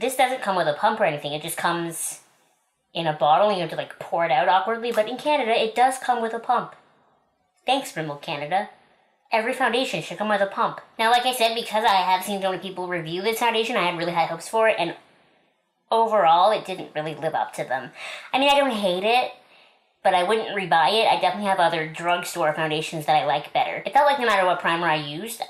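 No technical faults can be heard anywhere in this clip. Nothing in the audio needs a timestamp or a note of its own.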